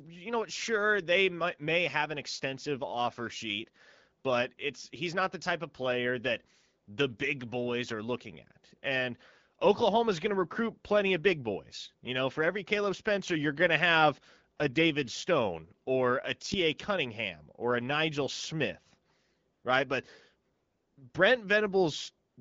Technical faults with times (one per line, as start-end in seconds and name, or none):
19.53-19.63 AMR comfort noise
20.53-20.97 AMR comfort noise
22.29-22.37 AMR comfort noise